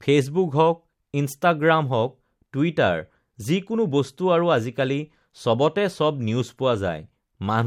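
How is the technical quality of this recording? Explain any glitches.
The technical quality of this recording is sound, with no glitches to explain.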